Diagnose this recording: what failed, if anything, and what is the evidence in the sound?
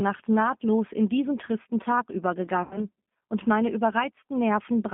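The codec stage is the first culprit. Throughout, the speech has that rough, slightly synthetic G.729 codec character, and the damage is plainly audible. Everything sits in a narrow telephone band, roughly 150 Hz to 3.4 kHz. At 8 kbit/s the codec isn't sending the waveform at all. The decoder rebuilds each 10 ms frame from a vocal tract filter, a pitch predictor and a handful of pulses, so the fine detail gets smeared into that rough, synthetic texture.

The network stage caused the second problem, VoIP packet loss concealed by the speech codec, from about 2.63 to 2.85 s, right before "und meine". Around 80 ms of audio went missing, which fits roughly four 20 ms packets. The decoder filled the gap by repeating its last pitch and filter with falling gain, so you hear the sound stretch and fade. Because each frame builds on the previous one, the speech stays weak or distorted briefly after the packets resume.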